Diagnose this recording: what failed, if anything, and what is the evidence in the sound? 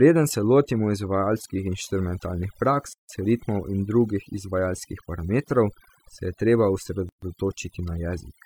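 Overdone noise removal, at the processing stage, runs through the whole clip. The background drops and breaks up into twinkling specks. The reducer was set too hard. It shuts frequency bands near its noise estimate and takes quiet speech detail with them.

A gap at a join of encoded pieces, at the codec stage, appears twice. There is silence from 2.93 to 3.09 s (160 ms) and from 7.09 to 7.22 s (133 ms), with smeared edges. The joins come 4 s apart. Separately encoded pieces were spliced without trimming encoder delay and end padding.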